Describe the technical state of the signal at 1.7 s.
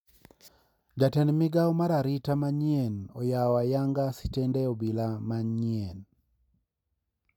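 At 1.7 s the speech signal is intact, with no dropout, distortion, glitch or other fault present at that moment.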